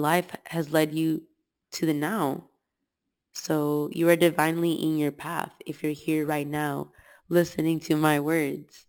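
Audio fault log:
Throughout: imaging from sample-and-hold upsampling. A bright metallic fizz sits between 6 and 12 kHz, about 19 dB below the speech, tracking its level. Each sample seems simply repeated, which fits a 12 kHz original rate, so mirrored spectrum copies went unfiltered.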